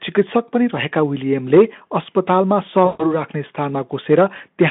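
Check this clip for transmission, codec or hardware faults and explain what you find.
One transmission fault is present: VoIP packet loss concealed by the speech codec. It runs from 2.85 to 3.19 s. About 140 ms of audio went missing, which fits seven 20 ms frames. The decoder filled the gap by repeating its last pitch and filter settings while lowering the gain. The speech smears into a buzzy tone or a coloured noise that fades. It stays weak or distorted briefly after packets return, because each frame builds on the last. The Speex line band, 150 Hz to 3.6 kHz, is heard throughout.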